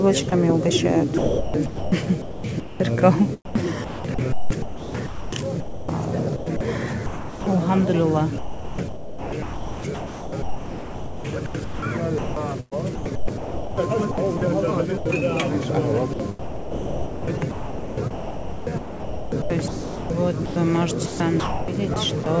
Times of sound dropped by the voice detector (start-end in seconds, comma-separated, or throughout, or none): 0.30-0.32, 14.97-15.05